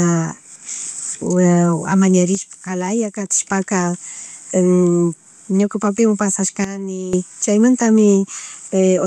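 A speech recording with two kinds of fault. At 0.68 s, compressed frames are skipped: about one 26.1 ms frame, roughly 30 ms of audio, goes missing, leaving a short smeared blip where overlapping neighbours join, visible as a thin vertical seam in the spectrogram. From 2.35 to 3.30 s the level drops by about 6 dB, and from 6.64 to 7.13 s by about 12 dB. Speech and background noise fall together, then recover abruptly, giving squared-off steps in the waveform envelope and uniformly darker spectrogram bands, most likely a sudden gain jump applied without a ramp.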